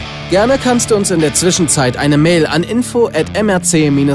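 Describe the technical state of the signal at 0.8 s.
At 0.8 s the audio is intact, with no dropout, distortion, clicks or other technical fault to be heard at that point.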